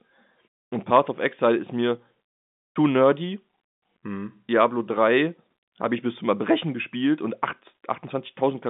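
No technical faults can be heard in this speech recording, which carries the expected narrow band of G.711 telephone coding, from 150 Hz to 3.6 kHz.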